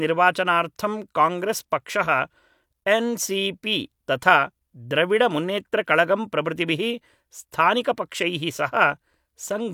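Nothing here jumps out as a technical fault; the speech just carries on steadily without any glitch worth pointing to.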